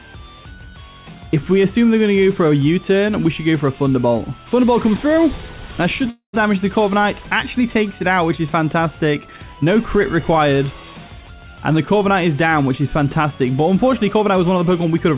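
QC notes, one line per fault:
6.10–6.35 s, long network dropout: about 0.24 s of audio likely lost in transit, concealed as a fading buzz, then brief silence before the sound resumes.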